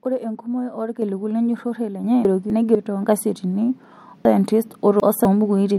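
A speech recording in which the microphone volume stepped up three times: about 6 dB at 1.02 s, about 4 dB at 2.04 s and about 2 dB at 3.06 s. Each time the voice and the background noise get louder together in a single instant, which separates it from a talker simply raising their voice. There are also two stretches of chunks out of order, from 2.25 to 2.75 s and from 4.25 to 5.25 s. In these, 250 ms blocks play late, one block late in the first stretch and three in the second. The result is a jumbled passage with hard joins. Unlike a dropout, nothing is missing, because the audio is only rearranged.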